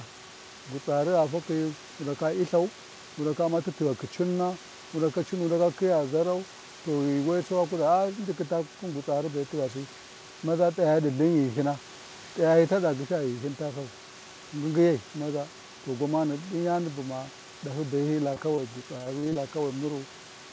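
At 18.34–18.38 s and again at 18.56–18.60 s, short concealed packet loss: about 20 ms of audio each time went missing and was filled by continuing the preceding sound. Each is heard as a brief smear or wobble and appears as a short, overly smooth, repeated spectral slice.

From 18.98 to 19.37 s, repeated packet loss produces robotic sound: six gaps, the longest 28 ms, are patched in turn, covering about 30% of the stretch. The result sounds choppy, and the spectrogram shows striped, repetitive patches.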